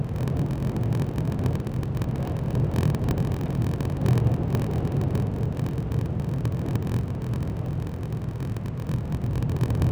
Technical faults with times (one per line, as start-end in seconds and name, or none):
0.00-9.92 block size mismatch (padded)